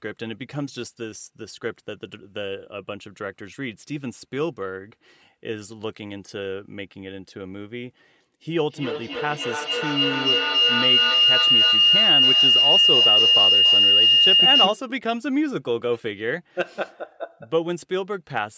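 Speech clip with a feedback howl from 8.56 to 14.96 s: a loop between two devices in one room builds a tone near 3 kHz, with the loop repeating about every 0.3 s, and peaking about 9 dB above the speech.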